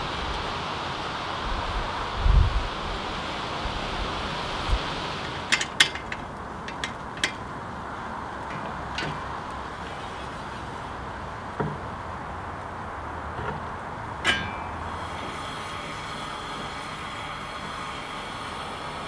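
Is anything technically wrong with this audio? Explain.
No, nothing technically wrong can be heard here.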